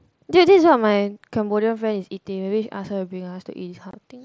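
At 3.91 to 3.94 s, unconcealed Bluetooth headset packet loss drops roughly 22.5 ms of the speech, which fits about three lost frames on the wideband mSBC link, with silence or an idle pattern filling the gap, so a brief hole opens with abrupt edges.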